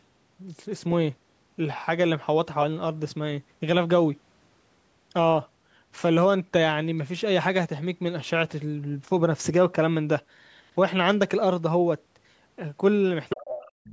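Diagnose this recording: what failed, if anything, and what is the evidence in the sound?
Other side's voice leaking through, 13.29 to 13.43 s and again from 13.62 s to the end: a second voice appears, first nearly as loud as the speech, then much fainter. This is likely residual loudspeaker echo that the call's echo canceller failed to subtract from the microphone signal.

Speech suppressed in double talk, 13.35 to 13.66 s: the talker's speech drops sharply, by roughly 30 dB at its deepest, over about a third of a second while the leaked voice overlaps it. The likely cause is the echo suppressor in the call processing treating both voices as echo and attenuating them together.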